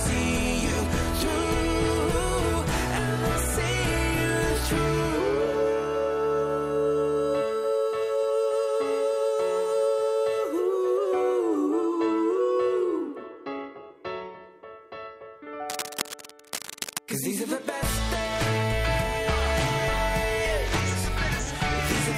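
A worn cable, connector or control was likely being moved between 15.69 and 16.98 s, its contact resistance jumping around rapidly as it shifted. That unstable contact produces cable scratch noise: dense, irregular bursts of crackle laid over the sound for about 1.3 seconds. The scratching sits roughly 10 dB below the signal, heard as a rough, rustling grit, then stops once the contact settles.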